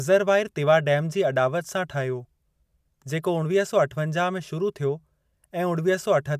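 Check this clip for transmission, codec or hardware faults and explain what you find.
Nothing in this speech recording points to a fault. No event in the audio needs explaining.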